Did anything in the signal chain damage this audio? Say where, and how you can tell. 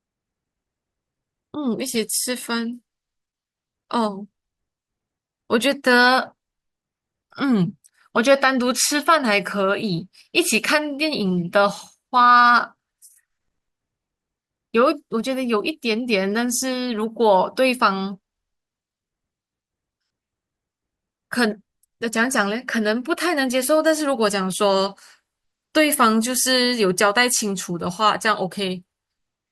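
Yes. A corrupt frame decoded at the codec, 1.93–1.98 s: flipped bits misplaced energy across a couple of frames, giving a chirp, squeak, blip or noise burst seen as a stray spectrogram blot and a waveform spike.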